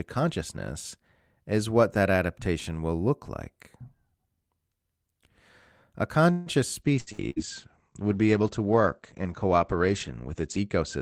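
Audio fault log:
6.31–6.49 s, call audio freeze: the sound stalls for about 150 ms, the last moment carried on as a buzz or hiss that fades without reaching silence. The likely cause is packets held up in transit so the jitter buffer ran dry and the receiver had to stretch what it had. When delivery resumes, playback picks up exactly where it stopped. Nothing is lost, but the rest of the audio now runs about 150 ms later.
6.86 s to the end, call bitrate drop: the encoder falls from 32 kbps to 12 kbps and stays at the low rate for about 3.8 s. With so few bits it codes more coarsely and narrows the audio band from 20 kHz to 8 kHz, so the speech turns muffled and rough, losing its top end and crispness. It never recovers before the clip ends.
7.00–7.10 s, 7.13–7.21 s and 7.30–7.39 s, burst of packet loss: three closely spaced losses, each removing about 60 ms of audio. In each gap the receiver extends the last sound for roughly 55 to 65 ms, holding a voiced sound as a buzz or letting a hiss fade down, then jumps ahead. 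The missing stretch is skipped. Together they give a stuttering, broken patch right after the bitrate falls.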